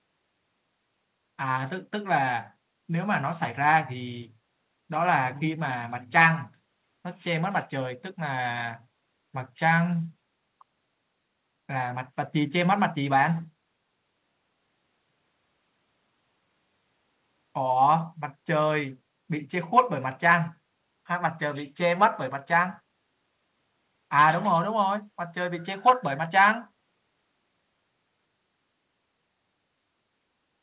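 Nothing goes wrong anywhere in this speech; it simply carries the narrow telephone-style sound of a G.711 mu-law call at 64 kbps, with nothing above 4 kHz.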